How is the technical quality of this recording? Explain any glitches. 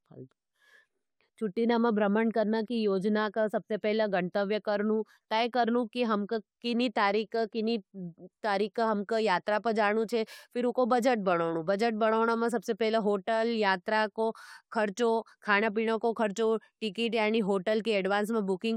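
Listening closely to the speech in this recording, nothing stood out as a technical problem.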